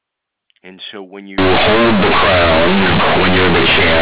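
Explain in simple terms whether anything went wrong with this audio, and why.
Partway through, the system started treating the telephone-coded sound as ordinary plain samples. The audio was stored in A-law, the squeezed format used by G.711 telephone coding, but from 1.38 s to the end it was played back without being unsqueezed. That is companded audio read as linear. Right after "so when", quiet and loud moments come out equally huge and bent out of shape, giving a harsh, buzzy roar, with loud hiss filling the gaps between words.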